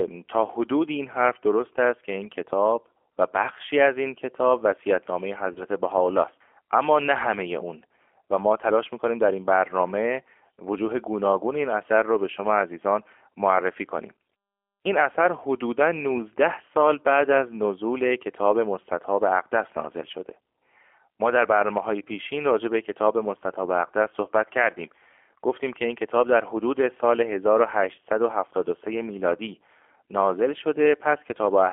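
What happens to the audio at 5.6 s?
At 5.6 s the speech hits VoIP packet loss concealed by the speech codec. The disturbance runs from 5.53 to 5.64 s. About 30 ms of audio went missing, which fits a single lost packet. The decoder filled the gap by repeating its last pitch and vocal tract filter while turning the gain down. That gives a brief buzzy tone or coloured noise that fades. The voice then sounds weak or distorted until about 5.64 s.

Underneath this moment sits the G.729 codec damage found across the whole clip. The audio is squeezed into a band of roughly 300 Hz to 3.4 kHz, with nothing above. The speech is rebuilt from a filter, a pitch predictor and a few pulses per frame. That is why it sounds rough and synthetic, a texture that points to an 8 kbit/s codec. The damage is plainly audible here.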